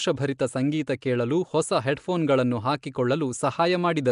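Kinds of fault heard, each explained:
Nellymoser compression: the speech sounds gritty, hissy and smeared, as if underwater, and nothing reaches above 10.6 kHz. This is likely Flash's coarse microphone codec filling starved bands with noise.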